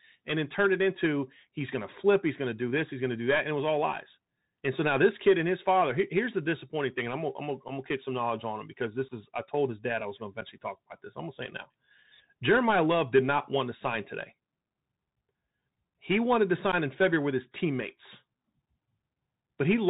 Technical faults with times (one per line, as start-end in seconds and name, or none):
0.00-19.89 Bluetooth CVSD headset codec
7.68-7.70 unconcealed Bluetooth headset packet loss
9.09-9.11 unconcealed Bluetooth headset packet loss
10.41 unconcealed Bluetooth headset packet loss
16.72 unconcealed Bluetooth headset packet loss